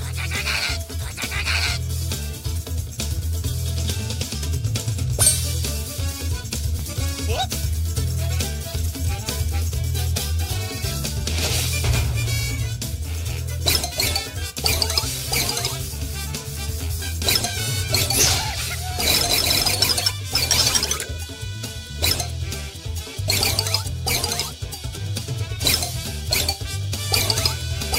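No audible faults occur anywhere in the audio.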